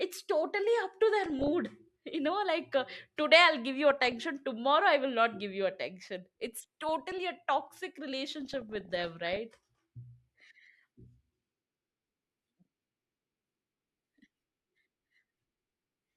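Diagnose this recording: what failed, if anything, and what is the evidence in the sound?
DAB burbling at the codec after weak reception: bursts of burbling at 1.23–1.48 s after "totally up to", 3.90–4.12 s, 6.42–7.18 s before "a toxic", and 8.40–9.37 s. Error rates of 0.3–0.7 percent corrupt MP2 scale factors, so single sub-bands jump for a frame. On a spectrogram these show as short, bright rectangular blocks in narrow bands.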